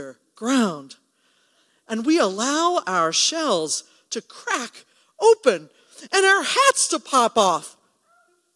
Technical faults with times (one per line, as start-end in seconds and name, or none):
none